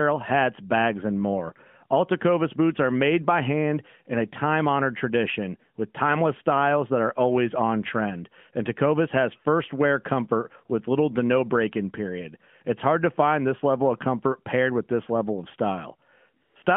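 A speech recording over a narrowband mobile line, band-limited to roughly 150 Hz to 3.4 kHz with light codec colouring consistent with AMR-NB at 12.2 kbps, has brief AMR comfort noise near the end. At 16.44 to 16.56 s and again at 16.64 to 16.66 s the real background drops out, replaced by smooth, steady synthetic hiss. The phone stopped sending speech frames for about 120 ms and then 20 ms.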